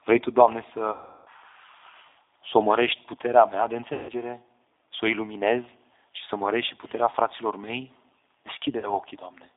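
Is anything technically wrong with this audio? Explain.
Yes. Throughout, the speech sounds rough, slightly synthetic and confined to about 300 Hz to 3.7 kHz. This is the G.729 codec: its 8 kbit/s model rebuilds speech from a few pulses per frame.

At 0.92–1.29 s, at 3.93–4.12 s (just after "omărești puterea mea de") and at 8.79–8.90 s, the speech smears into a buzzy tone or coloured noise that fades. This is VoIP packet loss concealed by the speech codec: the decoder extrapolated across 340, 160 and 40 ms of missing audio.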